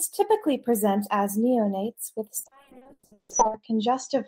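At 2.43 s a call bitrate drop takes the encoder from 32 to 6 kbps. Bandwidth narrows from 20 kHz to 8 kHz, so the speech turns muffled and coarse rather than breaking up.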